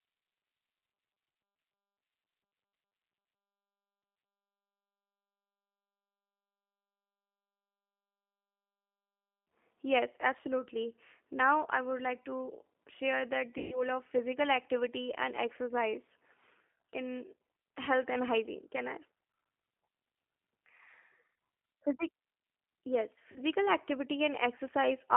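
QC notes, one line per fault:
throughout: G.729 codec. The sound is confined to roughly 250 Hz to 3.4 kHz, with nothing above 4 kHz. Speech stays intelligible but rough and slightly synthetic, which fits an 8 kbit/s G.729A stream. The decoder rebuilds each 10 ms frame from a vocal tract filter, a pitch predictor and a few pulses, so fine detail is replaced by a rough, synthetic texture. That texture, beyond the band limit alone, separates it from a clean narrowband telephone line.
13.58–13.83 s and 23.32–23.41 s: VoIP packet loss concealed by the speech codec. Audio is lost for about 140 ms in the first event, consistent with seven 20 ms packets, and for about 40 ms in the second, consistent with two. The decoder fills each gap by extending its last pitch and filter state, so the sound stretches into a fading buzzy tone or coloured noise instead of dropping to silence. Speech stays weak and distorted briefly after packets resume because each frame builds on the one before, which is why the first event runs to about 0.25 s.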